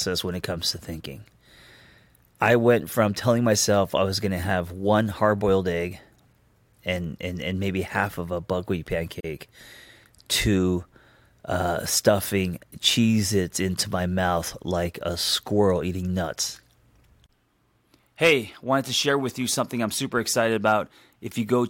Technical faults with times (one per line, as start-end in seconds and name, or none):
9.20-9.24 gap at a join of encoded pieces